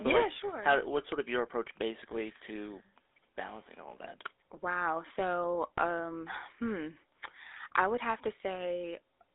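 From start to finish the speech runs through a GSM full-rate codec, and the damage is plainly audible. Rather than storing the waveform, that codec sends a model of the vocal tract and excites it with pulses on a fixed grid, keeping only every third excitation sample, which fits the old 13 kbps phone rate. The band sits between 300 Hz and 3.6 kHz, so there's no low end and nothing airy on top.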